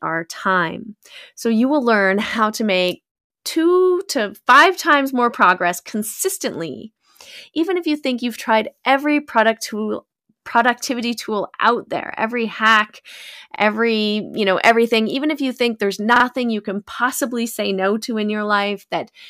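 At 13.56 s, just after "out there every hack", there's a repeated buffer: fresh audio didn't arrive in time, so the last chunk played once more, giving a quick stutter with a hard join that fits a 40 ms buffer. At 16.16 s, after "if you think there's", the last chunk plays twice extra, so the stutter runs longer.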